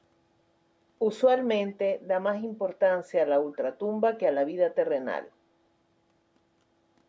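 At 3.53 to 3.57 s there is a brief echo leak. A very faint, delayed copy of the speech surfaces for a moment, trailing the original by 370 ms. It is likely loudspeaker sound that an echo canceller failed to remove fully before sending it back.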